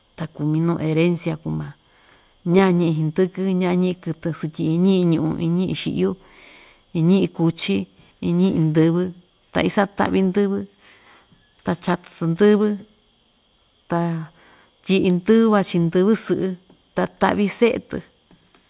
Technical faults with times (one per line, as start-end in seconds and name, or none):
none